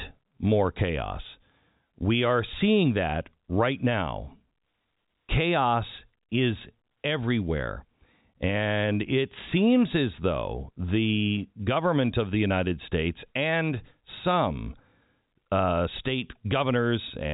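No technical faults detected.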